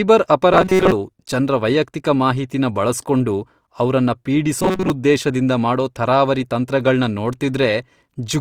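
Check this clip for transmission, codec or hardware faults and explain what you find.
Two short faults are present, both robotic sound from repeated short buffers: 0.53 to 0.92 s, just before "ಜನ್ರ ವೈಯಕ್ತಿಕ ಮಾಹಿತಿನ ಬಳಸ್ಕೊಂಡು", and 4.59 to 4.90 s, right after "ವೈಯಕ್ತಿಕ ಮಾಹಿತಿನ ಬಳಸ್ಕೊಂಡು ಅವ್ರನ್ನ". The speech becomes a rigid metallic buzz at 188 Hz. Most of each stretch is repeated material, likely from roughly 5.3 ms buffers being replayed while real audio was late.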